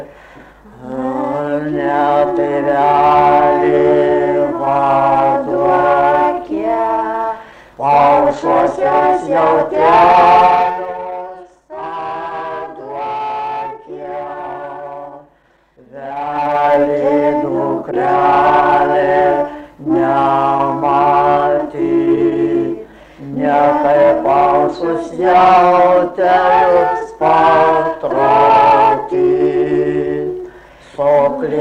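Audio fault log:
10.44–10.96 s and 16.12–16.78 s, zipper noise: the level drops by around 15 dB in the first stretch and comes back up by a similar amount in the second, but each move is made in hard 2 dB jumps instead of a smooth ramp. Every jump puts a tiny discontinuity in the waveform, so you hear a quick run of ticks, something like ten to fifteen a second, zipping along on top of the sound while the level shifts.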